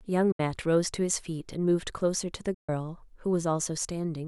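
The speech cuts out abruptly twice: from 0.32 to 0.40 s, a gap of about 70 ms, and from 2.54 to 2.69 s, about 140 ms. Each time it returns further along, as if it had kept playing through the silence. This is likely a Bluetooth dropout, where packets missed their delivery deadline to the headphones and were discarded. The lengths suggest roughly three lost packets in the first gap and six in the second.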